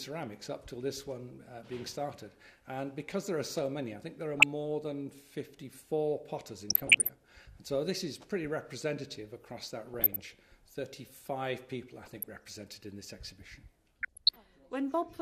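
DAB burbling appears at 4.34 to 4.43, 6.70 to 7.09, 9.93 to 10.35, 12.01 to 12.42 and 14.03 to 14.37 s. Bit errors, around half a percent, slip past error correction and corrupt sub-band values, giving short blips of noise in single sub-bands. A spectrogram shows isolated band blocks flaring frame by frame.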